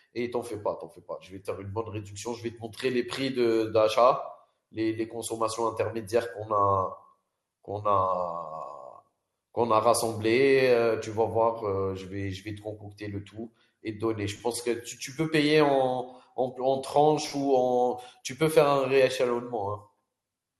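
Speech throughout shows plainly audible MP2 compression damage: the top end sounds dull and flickering, with a gurgling, granular roughness, which fits a low bitrate near 80 kbps. Unlike a plain low-pass filter, upper sub-bands drop in and out, likely from starved MPEG Layer II bit allocation.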